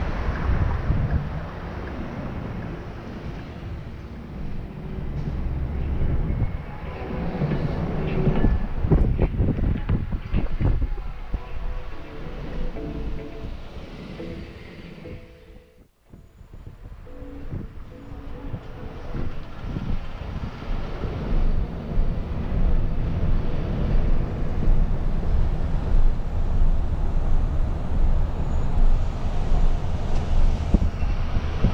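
No technical faults can be heard anywhere in this audio. There is nothing at any point that calls for attention.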